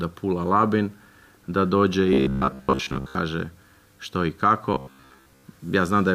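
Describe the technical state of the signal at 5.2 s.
At 5.2 s the signal sits inside a stretch of robotic sound from repeated short buffers, from 4.74 to 5.44 s. New audio was likely arriving too seldom, so a short block of about 15 ms was replayed in place of most of the real audio. That repetition imposes a fixed 66.8 Hz buzz, turning the sound rigid and metallic.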